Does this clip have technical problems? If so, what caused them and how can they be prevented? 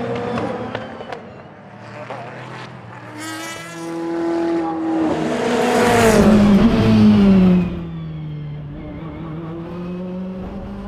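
Yes. From 7.5 to 7.9 s there is zipper noise: a drop of about 15 dB made in 1 dB steps, around fifty a second, with each jump clicking. The waveform shows a staircase envelope, and a spectrogram shows faint vertical lines at each step. Ramping the gain smoothly per sample prevents it.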